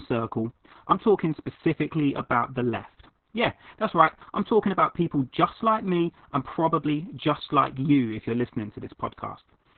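Muffled, hoarse, slightly robotic speech throughout, with no brightness above about 4 kHz. This is heavy Opus voice compression: the SILK coder has narrowed the band to narrowband and coarsely coded the excitation, consistent with a very low bitrate of around 6 kbps.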